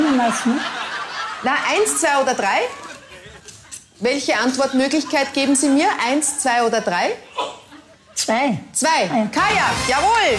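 No technical faults can be heard anywhere in this clip.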